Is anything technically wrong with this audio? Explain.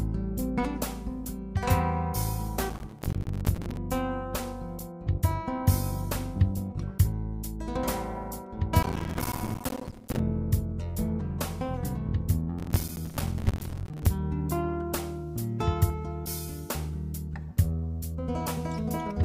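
Yes. Three bursts of processor overload crackle occur, at 2.70 to 3.77 s, 8.83 to 10.19 s and 12.59 to 14.06 s. In each, the processing could not finish its small buffers on time, roughly 5 ms each, and many deadlines were missed in succession. Each miss drops a short block to silence with abrupt edges, so the stream is chopped by roughly 70, 150 and 100 tiny gaps respectively. The result is a gritty, tearing crackle over the sound that stops once each load spike ends.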